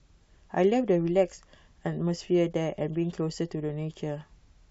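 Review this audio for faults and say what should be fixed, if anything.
Nothing here needs fixing, as no faults turn up anywhere in this bit of speech.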